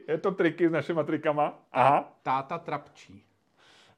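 No technical faults are audible anywhere in this recording.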